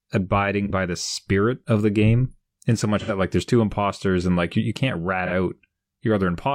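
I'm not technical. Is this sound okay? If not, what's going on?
No. At 0.65 to 0.71 s, just before "by the spirit of", at 2.99 to 3.10 s, after "the game in so", and at 5.26 to 5.32 s, after "like you you can't", there is AAC frame loss with concealment. Pieces of the compressed audio went missing, and the player filled each gap with a guess built from the sound just before it. You hear a brief smeared, noisy patch rather than the clean silence of a plain dropout.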